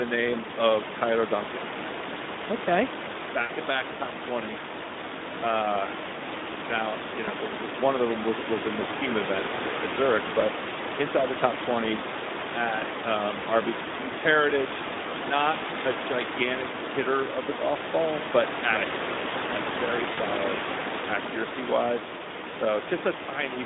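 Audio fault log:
Throughout: Speex codec damage, plainly audible at a rate that fits 11 kbps. Too few bits for the excitation leave the speech hoarse and noisy. The band is confined to 200 Hz to 3.7 kHz, so a spectrogram shows a hard ceiling near 3.7 kHz and smeared harmonics under it.
3.41 to 3.52 s, 7.25 to 7.30 s, 20.13 to 20.24 s: VoIP packet loss concealed by the speech codec. The decoder repeated its last pitch and filter with falling gain, which gives a brief buzzy tone or coloured noise that fades. These points are just before "to back top twenties", between "now you" and "the one of them", and after "accurate right like very". The waveform shows a decaying envelope.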